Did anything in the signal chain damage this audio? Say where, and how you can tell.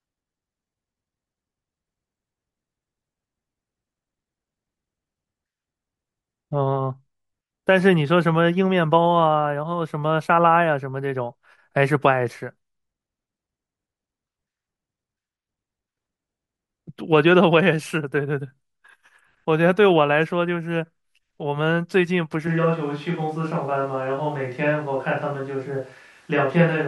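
Yes. At 22.47 s the speech turns roomy and hollow and stays that way to the end. This is a switch to a distant microphone, likely after the close microphone's feed dropped at the capture stage. Bass thins while level holds steady, with room noise about 35 dB below the speech.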